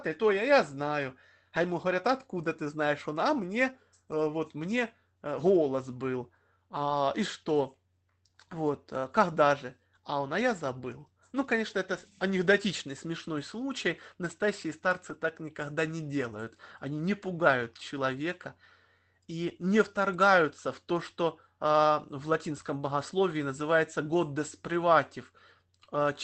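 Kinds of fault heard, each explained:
Lost packet rebuilt from error correction: seven short stretches of 20 to 60 ms, spread from about 3.0 s to 22.4 s. At each one, one to three packets went missing and the decoder played the lower-bitrate copies carried in the Opus packets that followed. No gap opens, but the sound turns briefly rougher and noisier than the surrounding call audio, which tops out at 8 kHz. On a spectrogram these show as short smeared, grainier patches with blurred harmonic detail, while the waveform stays continuous.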